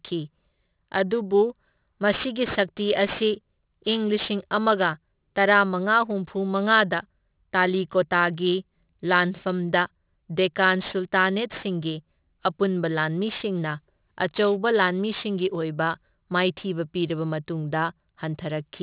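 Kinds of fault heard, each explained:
Aliasing: unfiltered downsampling, pointing to an 8 kHz rate, folds sibilants above 4 kHz back as gritty false tones about 20 dB down, not simply muffled.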